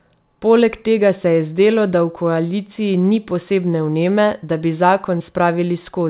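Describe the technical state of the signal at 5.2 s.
At 5.18 to 5.22 s, just after "posebne vneme da bi", a short concealed packet loss occurs: roughly 20 ms of audio, which fits one lost packet, never arrived, so the decoder extended the preceding sound and blended back, leaving a brief smear or wobble.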